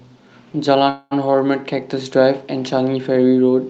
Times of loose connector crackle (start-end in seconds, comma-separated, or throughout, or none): none